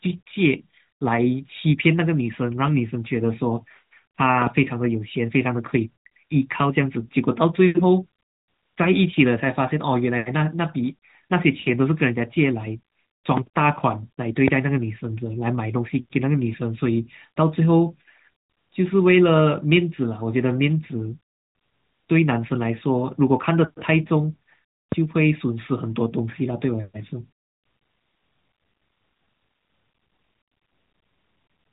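At 14.48 s a single loud pop cuts through the speech, peaking about 20 dB above it, and another like it follows at 24.92 s. Each is a sharp, very brief click-thump lasting only about 20 ms, and the speech carries on unbroken beneath it. The likely cause is a sudden voltage step, such as a connector, switch or static discharge, whose impulse the downstream circuitry passes on as a pop. The speech is band-limited by the narrowband mobile codec, with nothing above about 3.8 kHz.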